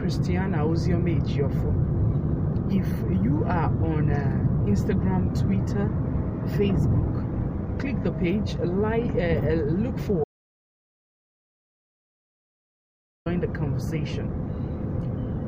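At 10.24 s the sound cuts out abruptly and stays silent until 13.26 s, an audio dropout to silence of about 3.02 s. The input was likely lost while recording continued, so unlike a natural pause, no room tone or noise floor remains.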